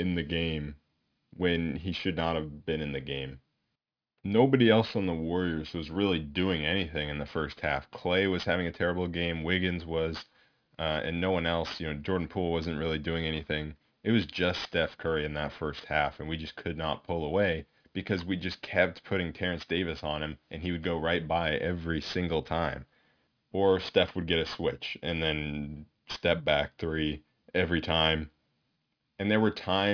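Throughout the speech, aliasing: the sound points to a sample-rate drop to about 11 kHz without an anti-alias filter, so content above 5.5 kHz folds back down as false, unrelated tones roughly 20 dB under the signal, making sibilants gritty and metallic and crowding the spectrum against 5.5 kHz.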